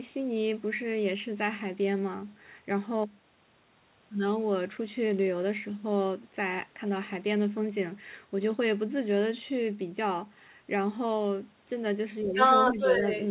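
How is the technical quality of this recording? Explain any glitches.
The final second of the speech has clear glitches, all falling within the narrowband call sound, which has nothing above 4 kHz, consistent with a G.711 mu-law path.

Speech suppressed in double talk: at 12.22–12.37 s the talker's level drops by roughly 10 dB, with shallower dips around 12.72–12.79 s and 13.01–13.06 s. This is likely an echo canceller turning down both voices as they overlap.

Other side's voice leaking through: from 12.35 to 13.24 s a second voice is audible, a little louder than the talker. It is likely loudspeaker playback that the echo canceller failed to remove.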